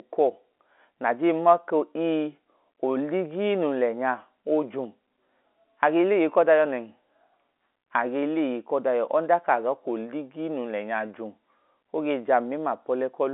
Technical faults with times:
none

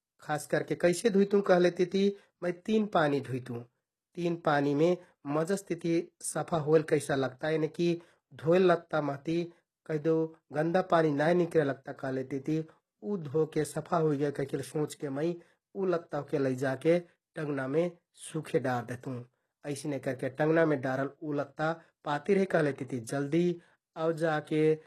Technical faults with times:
0.00-24.87 HE-AAC compression
17.34 pre-echo

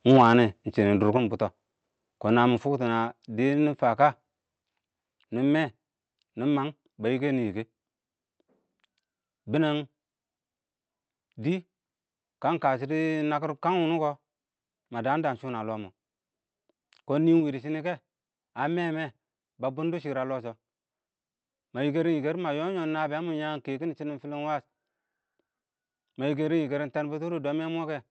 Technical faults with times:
0.10-0.29 microphone overload
0.17 microphone volume stepped down
1.17 microphone volume stepped down
2.58 microphone volume stepped down
4.62 microphone volume stepped down
9.84 microphone volume stepped down
17.40 microphone volume stepped down

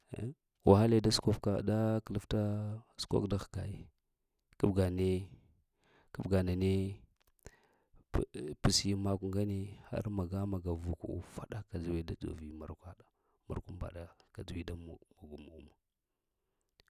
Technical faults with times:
none

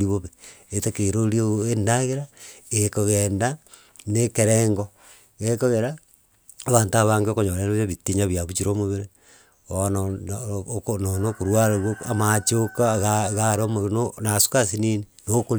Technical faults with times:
none

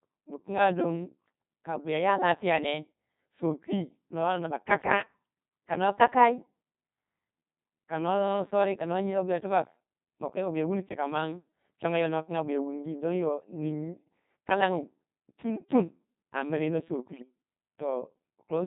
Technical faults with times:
0.00-18.67 Codec 2 vocoder
17.14-17.22 bit errors on digital voice radio

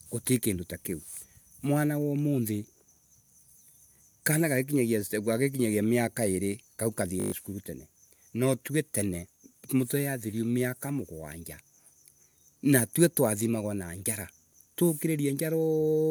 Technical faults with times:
7.20-7.32 system hang loop

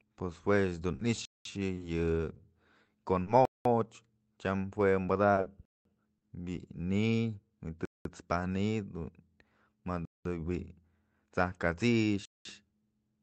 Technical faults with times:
0.95-3.30 scattered short gaps
1.25-1.45 gap between chunks
3.45-3.65 gap between chunks
5.34-5.49 short concealed packet loss
5.65-5.85 gap between chunks
7.85-8.05 gap between chunks
10.05-10.25 gap between chunks
12.25-12.45 gap between chunks

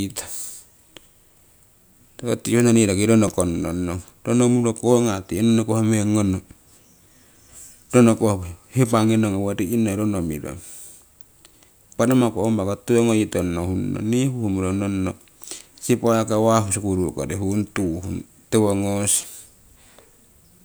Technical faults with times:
3.28 repeated buffer
19.21 repeated buffer

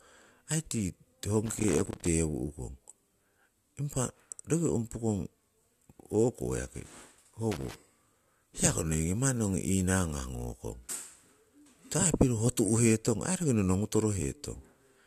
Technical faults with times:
1.46-2.07 loose connector crackle
7.51-7.75 loose connector crackle

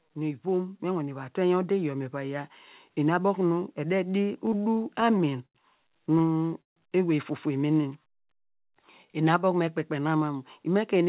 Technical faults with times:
0.05-2.59 automatic gain rising
4.46-5.57 repeated stalls (stutter)
6.19-6.78 repeated stalls (stutter)
7.75-9.46 jitter buffer slow-down

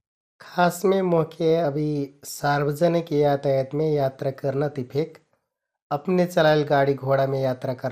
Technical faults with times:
0.00-7.92 MP2 compression

